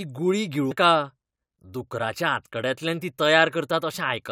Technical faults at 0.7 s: compressed frames skipped

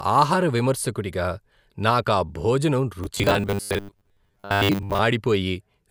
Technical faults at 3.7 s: robotic sound from repeated short buffers

